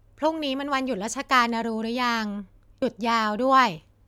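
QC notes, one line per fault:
2.81 s, compressed frames skipped: whole coded frames were never decoded, so the speech jumps ahead about 70 ms.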